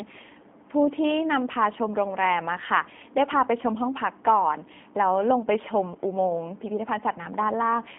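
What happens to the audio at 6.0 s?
At 6.0 s you're hearing the G.729 codec, which runs through the whole clip rather than appearing at that one moment. The speech is narrowed to a phone-line band of roughly 200 Hz to 3.5 kHz, so it's thin and muffled up top. The codec rebuilds each short frame from a vocal tract filter, a pitch predictor and a few sparse pulses, which is why the voice sounds plainly rough and a bit synthetic. That fits a low-rate coder around 8 kbit/s.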